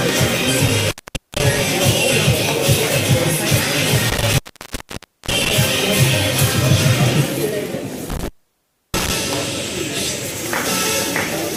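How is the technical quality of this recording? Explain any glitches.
The recording has three dropouts from an intermittent contact, at 0.67–1.61 s, 4.09–5.58 s and 8.10–9.11 s. A loose connection opens and cuts the audio for about 0.46 s, 0.91 s and 0.66 s, with crackle at each edge and faint hiss while the line is open.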